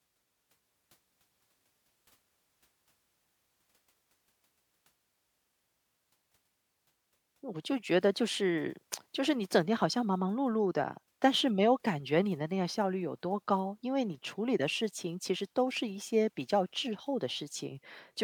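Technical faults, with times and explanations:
No technical faults can be heard in this speech recording. There is nothing to list against any point in the audio.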